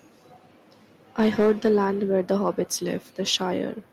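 Speech with hard clipping from 1.20 to 1.85 s, overdriven by about 5 dB, and from 2.31 to 2.48 s by about 1 dB; flattened peaks add harsh upper harmonics.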